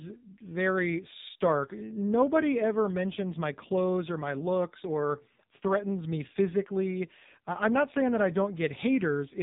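Throughout, the speech sounds buzzy and synthetic, with nothing above 3.8 kHz. This is heavy AMR narrowband mobile codec damage: the vocal-tract model and sparse pulse excitation are starved of bits, which fits AMR-NB's low 5.9 kbps mode.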